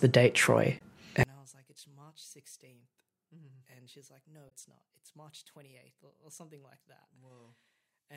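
Damaged data in the compressed stream of this speech recording makes the decoder misread frames and lose sync twice, from 0.75 to 0.81 s and from 4.46 to 4.51 s. Each time it has to hunt for the next valid frame header, and the gap is heard as a short chirp or blip. From 1.23 s to the end, the level drops by about 34 dB, and the likely cause is one channel inverted, with reversed polarity. When the two channels are summed to mono, the centred speech they share cancels almost entirely, and only their small difference survives. What remains is a faint trace of the voice for the rest of the clip.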